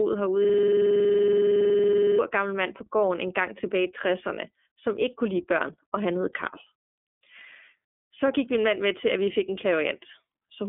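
From the first moment, the speech carries the iLBC codec's narrowband sound: nothing passes above 3.7 kHz, and the line band runs roughly from 250 Hz to 3.5 kHz. The damage is plainly audible as a rough, slightly synthetic texture, because each 30 ms frame's excitation is coded independently of the one before. The 30 ms framing and the coarseness fit the 13.33 kbps mode. On a spectrogram, energy stops at a flat ceiling near 3.7 kHz, with a thin floor below 250 Hz.

From 0.45 to 2.19 s, just before "gammel mand på gården", a system hang loop takes over. The system froze while the audio hardware kept replaying the same ring buffer, so one 46 ms slice repeats 37 times. At a loop rate of 21.5 Hz, it sounds like a rapid, buzzing machine-gun stutter. The loop length fits a 2048-sample buffer. The waveform shows an identical short segment tiled over and over, and the spectrogram shows a rigid vertical striping at the loop rate.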